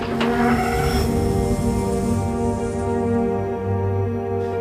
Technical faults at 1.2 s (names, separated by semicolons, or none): none